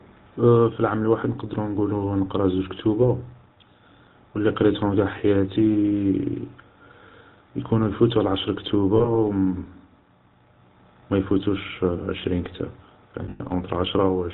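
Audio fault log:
throughout — GSM full-rate codec: the speech is buzzy and gravelly with nothing above 4 kHz. This is the plainly audible rasp of a vocal-tract model driven by sparse regular pulses, consistent with 13 kbps full-rate coding. It is constant, unlike the brief glitches below.
8.96–9.17 s, 13.24–13.41 s — lost GSM frames: just after "يكونو يفوتو العشر", 80 ms drops out across 0.2 s, then 140 ms across 0.16 s, the longest gap around 0.1 s. The last good frame is repeated, leaving a metallic ring rather than silence.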